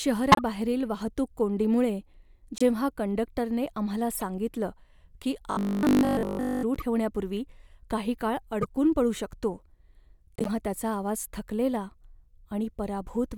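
Corrupt frames decoded show up as brief chirps and noisy blips at 0.32 to 0.41 s, 2.58 to 2.62 s and 4.15 to 4.23 s, covering anywhere from a single frame to a few. Damaged bits in each compressed frame made the decoder rebuild energy at the wrong frequencies, so each burst lasts only as long as the bad frames. Unlike a dropout, the gap is filled with spurious sound rather than silence.

From 5.51 to 6.63 s the speech turns into a rigid, metallic 50 Hz buzz that still loosely tracks the syllables. This is likely robotic sound from repeated short buffers. Fresh audio arrived too seldom, and nearly all of that stretch was filled by looping a 20 ms slice. What sets it apart from a corrupt frame is the steady imposed pitch, sustained for over a second, instead of a random squeak.

The corrupt frame damage returns at 6.75 to 6.82 s and 8.62 to 8.65 s, each spanning a few frames. The longest burst runs from 10.36 to 10.48 s and covers several frames.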